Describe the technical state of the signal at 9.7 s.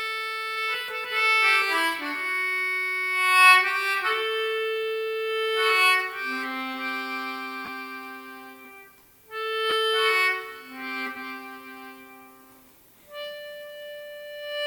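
At 9.70 to 9.73 s, two consecutive Bluetooth LE Audio frames went missing. The roughly 20 ms gap fits two 10 ms LC3 frames. The LC3 decoder conceals the gap by reusing the last good spectrum with randomised signs, so the signal's spectral outline stays in place while its phase structure is lost. Any tonal content briefly turns into a noisy smear, and the gap is too short for the concealment's fade-down to take hold. The light lossy coding around this moment carries on as before.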